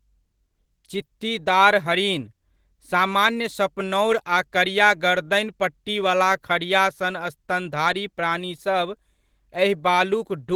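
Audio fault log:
throughout: clock drift between sender and receiver. The sender's clock runs about 3% slow relative to the receiver's, so samples arrive a little more slowly than they are played out and the jitter buffer keeps drifting toward empty. The receiver has to pad the stream to keep up. On a waveform this shows as small seams or repeated fragments scattered at uneven spacing rather than any single visible break.
0.16–10.46 s: repeated timing corrections. To make up for the slow sender, the receiver keeps inserting short repeated pieces, all in the same direction, so the stretch plays at about 97% of its natural rate and ends up around four tenths of a second longer in total. Each insertion is tiny, heard at most as a slight hiccup or a rhythm that doesn't quite flow. A spectrogram shows brief duplicated slivers of texture at irregular points, and the waveform shows matching short repeated cycles at the joins.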